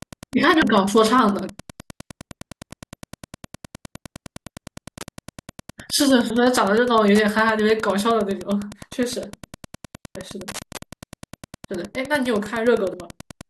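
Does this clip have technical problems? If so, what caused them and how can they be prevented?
Yes. Wi-Fi interference runs through the whole clip. A steady tick repeats about ten times a second, with one every 102.4 ms. It sits roughly 20 dB below the speech. A nearby Wi-Fi radio sends a regular beacon, and the audio circuit rectifies those bursts into audible clicks. The even spacing of the ticks points to that beacon. To prevent it, move the Wi-Fi device away from the audio gear and use shielded, shorter cables.

Damaged data in a compressed stream causes four short blips. They fall at 0.62 s, 2.71 s, 6.3 s, and from 12.91 to 12.94 s. Each is a brief glitch. Corrupted bytes in the encoded stream made the decoder misread frames there. It lost sync and jumped to the next frame header it could find. To prevent it, use a reliable transfer and storage path with checksums and error correction.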